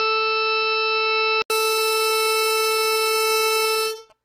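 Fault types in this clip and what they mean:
AAC compression: The music was likely squeezed through an AAC-LC encoder at a low bitrate, consistent with around 32 kbps. To save bits, the coder discards high-frequency detail and quantises what remains coarsely. Here nothing survives above 16.4 kHz, and the damage is plainly audible all the way through: the music sounds dull and smeared, with a warbling, fizzy texture on sustained tones where the coder can't keep up.
Input switched to a poorer device: For the first 1.5 s the music comes through what is likely a different, lower-grade input, such as a second microphone or a headset's call profile, before the system moves to the better one. That poorer path passes nothing above 5.6 kHz, so the opening sounds boxy and muffled. It also brings its own faint background noise, roughly 35 dB below the music. The loudness hardly changes, but an 80 ms gap of silence marks the changeover.
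GSM signalling bursts: From 2.69 s to 4.12 s, a nearby 2G phone is signalling to the network and sending short groups of radio bursts. The audio circuitry picks up this interference and rectifies it into sound. The result is a galloping, stuttering pattern of short buzzes at 217 Hz, sitting roughly 30 dB below the music until it stops just before the end.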